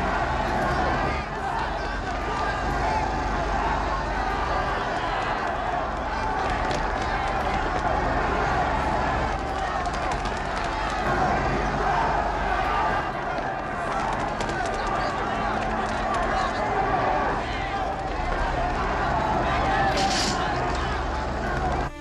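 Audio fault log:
No audible faults detected.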